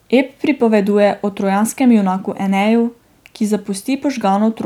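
No technical faults are audible.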